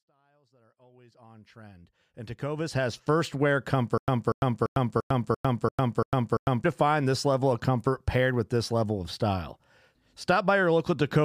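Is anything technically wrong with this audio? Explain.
Yes. From 3.98 to 6.64 s there is a stutter with silent gaps. A 240 ms fragment plays eight times, each followed by 101 ms of digital silence. A stalled stream likely replayed its last buffer and ran dry, losing the speech between. The waveform shows identical blocks split by flat silent stretches. The spectrogram shows repeating patches with blank vertical strips. The fade-in to 3.03 s is smooth, without a hard edge.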